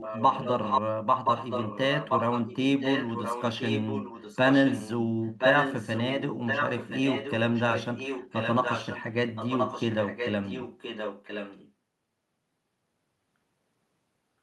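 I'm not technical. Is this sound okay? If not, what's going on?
No. There's an echo leak: the speech comes back about 1.02 seconds later. It happens at 0.0–0.81, 1.24–2.56, 2.8–4.91, 5.23–6.03, 6.46–9.03 and 9.35–11.72 s. In the first two stretches and at 5.23–6.03 the echo is as loud as the speech; elsewhere it is quieter, and it is faintest in the last stretch. The likely cause is a speakerphone whose echo cancelling let its own sound back into the call.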